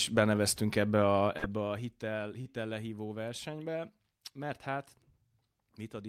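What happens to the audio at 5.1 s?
At 5.1 s the speech plays through intact, with no dropout, click or level jump.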